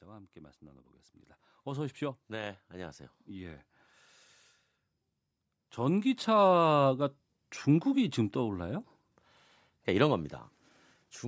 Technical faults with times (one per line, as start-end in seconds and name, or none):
1.63-3.71 automatic gain rising
5.77-7.07 automatic gain rising